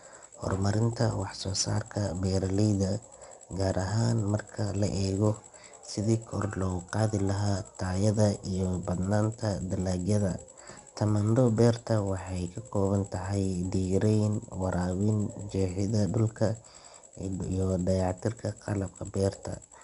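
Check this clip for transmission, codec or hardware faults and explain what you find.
One codec fault runs through the whole clip: 4-bit ADPCM compression. Each sample is coded as a coarse 4-bit step from a predicted value, and the step size adapts as the signal changes. The coding error rides on the speech as a gritty hiss that rises and falls with its level. It is plainly audible. Sharp attacks smear where the step lags. Nothing is heard above 10.6 kHz, which fits a sample rate near 22 kHz and about 89 kbps.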